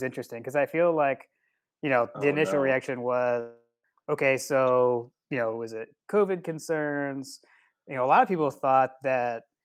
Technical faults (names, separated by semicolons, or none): long network dropout